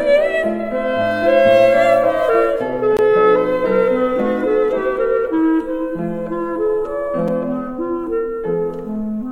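At 2.97 s the music drops out for a short hole of about 20 ms, and at 7.28 s a shorter 5 ms gap comes across more as a tick or pop. Both are blocks of digital silence, where runs of samples were replaced by zeros. The sound cuts to nothing and back with no fade. A dropout like this points to the output buffer not being filled in time.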